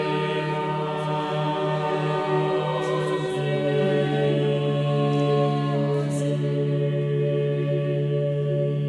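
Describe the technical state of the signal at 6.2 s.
At 6.2 s the music plays through intact, with no fault in the signal at that point.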